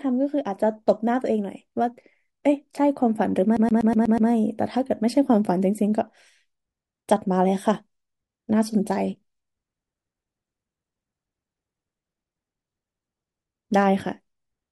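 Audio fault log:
3.57 to 4.30 s, CD stuck on one turn: the speech catches on a single slice of about 122 ms and plays it six times in a row, each pass separated by a tiny mute where the pickup jumps back. That's a scratch kicking the laser back one track at the same spot on every revolution, so the loop length is locked to one turn of the disc. The result is that quick, perfectly even skipping-CD stutter before playback breaks free.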